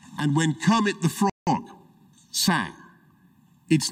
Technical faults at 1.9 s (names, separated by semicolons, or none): time-compressed catch-up